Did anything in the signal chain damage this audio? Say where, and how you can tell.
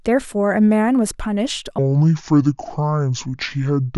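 Yes. From 1.79 s to the end, the speech runs at the wrong speed: 0.63x, roughly seven semitones deeper and slower, likely a playback clock mismatch.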